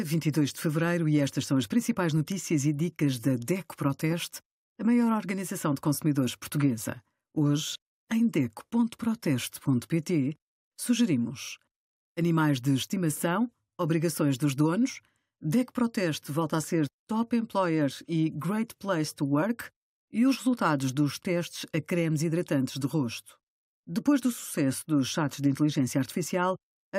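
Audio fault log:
No fault was found in this speech clip.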